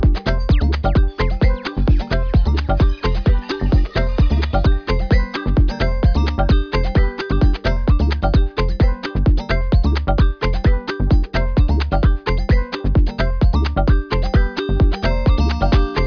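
From start to finish the sound carries aliasing: content above about 5.5 kHz was not filtered before the rate drop, which fits resampling to about 11 kHz, so it folds back as gritty, metallic tones roughly 20 dB down, with a spectrogram showing mirrored energy pressed against a hard 5.5 kHz edge.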